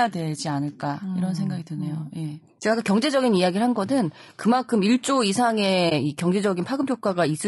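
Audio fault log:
Throughout: low-delay AAC compression. The speech sounds plainly rough and grainy, with a noisy fill between the harmonics and a thin, synthetic-edged top band. This is likely AAC-ELD coding at a low rate, around 32 kbps. Its short frames capture pitch structure poorly.
5.89–5.92 s: AAC frame loss with muting. The speech briefly fades out into a brief dip and then fades back in. This fits a single lost frame of about 20 ms whose spectrum the decoder zeroed, with the overlapping windows smoothing both edges of the dip.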